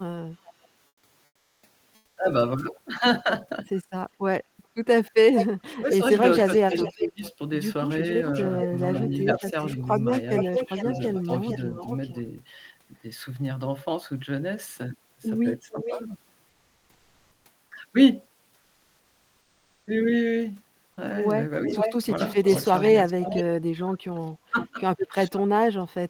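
From 0.45 to 0.53 s, a faint delayed copy of the speech returns about 411 ms late, far below the voice. This is an echo leak. The far end's echo canceller likely missed part of its loudspeaker pickup.

At 0.87 to 1.03 s, 1.25 to 1.63 s and 1.95 to 2.17 s, the real background is replaced by comfort noise. It is a steady, smoother noise, about 7, 6 and 1 dB quieter. The likely cause is discontinuous transmission during pauses, which fits Opus DTX.

From 5.36 to 12.18 s, the echo leak returns louder, about 10 dB below the speech and 434 ms behind it. Within that stretch, from 5.79 to 11.3 s, the speech is suppressed in double talk. It dips by as much as roughly 15 dB, for about a second in all. The canceller likely turned the voice down along with the echo.

From 15.7 to 16.0 s, a brief echo sounds about 453 ms late.

Comfort noise fills 16.49 to 17.45 s at an unchanged level, then 18.59 to 19.87 s at about 2 dB lower.

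From 21.66 to 25.42 s, echo runs about 475 ms behind the speech. Between 22.44 and 26.05 s, double-talk suppression cuts the voice harder, by up to roughly 35 dB, for about 1.5 s in total.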